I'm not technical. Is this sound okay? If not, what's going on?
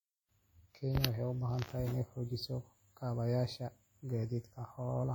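No. Throughout the clip, from start to finish, the speech carries WMA compression damage that is plainly audible. It was likely saved in Windows Media Audio at too low a quality. That format rebuilds sound in long chunks and smears small errors across each one, so the speech sounds ringing and washy, with a hiss that swells and fades along with the speaking.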